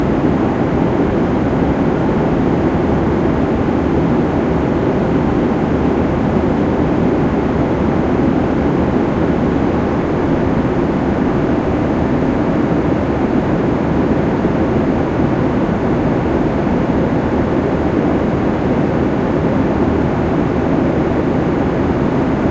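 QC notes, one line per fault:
Nothing to flag here; the sound comes through without any problems worth noting.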